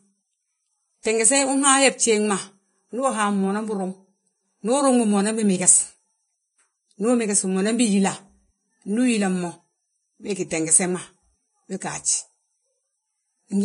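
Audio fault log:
throughout: Vorbis compression. The speech sounds hissy and grainy across the whole clip. Nothing is present above about 10.6 kHz, so the top end is missing. The remaining treble is rough, and fine detail has turned into noise of similar loudness. The damage is heavy, which fits a low bitrate near 25 kbps. The likely cause is low-quality Vorbis coding. It draws a smooth spectral outline and fills it with coarsely quantised detail.
1.03 to 1.05 s: pre-echo. A short hiss runs ahead of a sharp onset, spread over about 23 ms. The onset itself sounds soft and smeared rather than crisp. The codec spreads its quantisation noise evenly across each transform block. Here the attack falls late in a block. Noise sized for the loud part therefore leaks into the quiet moment just before it.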